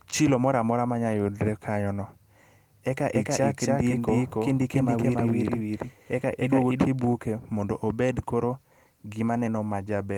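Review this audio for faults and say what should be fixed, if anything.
From 3.15 to 6.85 s, speech repeats about 300 ms late at equal level, cutting in and out abruptly. This is a doubled audio track, likely from a second, slower capture path. To prevent it, route the source through a single capture path and check edits for overlapping copies.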